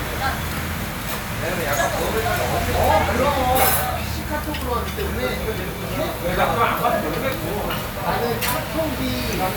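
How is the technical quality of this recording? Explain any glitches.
No glitches are audible anywhere in this recording.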